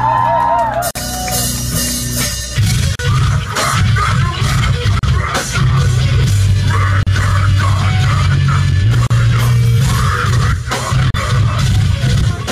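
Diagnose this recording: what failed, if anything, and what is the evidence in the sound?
The failure is at the codec stage: a gap at a join of encoded pieces. Short silences cut into continuous sound at 0.91, 2.95, 4.99, 7.03, 9.07 and 11.10 s, one every 2.0 s. The first lasts 46 ms and the rest 38 ms each. Each gap has smeared edges, and the sound resumes where it stopped. Two-second pieces were encoded separately and joined untrimmed, so each encoder's start-up delay and final-frame padding remain.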